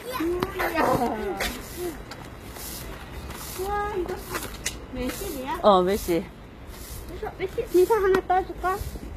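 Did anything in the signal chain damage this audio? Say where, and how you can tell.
Yes. Throughout the clip the treble sounds bright but gritty and metallic, with nothing above 14.9 kHz, and its upper harmonics fail to line up with the lower band. That points to the codec stage, likely HE-AAC compression at a low bitrate around 20 kbps, synthesizing the treble by spectral band replication.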